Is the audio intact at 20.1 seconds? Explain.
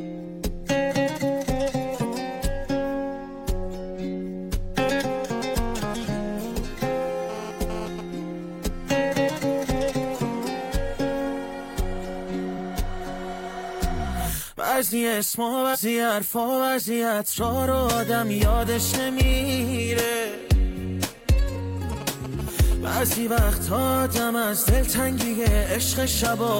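Yes, the audio is intact at 20.1 seconds, with no dropout, click, distortion or other fault audible at that point.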